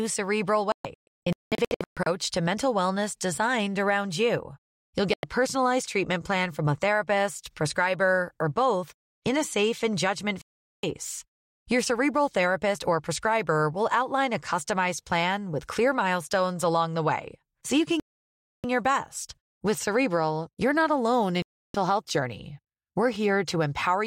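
The receiver repeatedly lost good frames and muted, a digital broadcast dropout, so the speech cuts to silence and that audio is simply gone. From 0.72 to 2.07 s it breaks into several short holes, the longest about 0.19 s. Full gaps follow at 5.14 to 5.24 s before "personalized treatment plan from", 10.42 to 10.84 s after "a safe and judgment", 18.00 to 18.64 s, and 21.42 to 21.75 s between "not alone" and "health journey".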